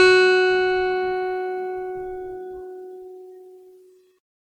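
Generation loss runs through the whole of this music. The sound is swirly and hollow, with a smeared, watery texture in sustained material and softened attacks, more damaged than a single encode at this rate would leave it. The likely cause is repeated lossy coding, which fits about seven successive MP3 passes near 90 kbit/s, each quantising on a shifted frame grid so the noise and spectral holes accumulate. The band stays open up to 20.1 kHz.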